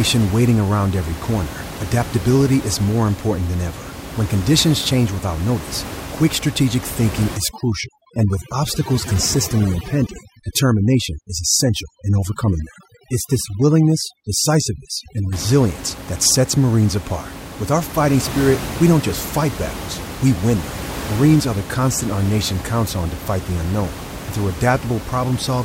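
From 7.37 to 15.33 s, overdone noise removal gates frequency bands near the noise estimate, leaving isolated twinkling specks between speech on the spectrogram, where room noise otherwise sits about 12 dB down.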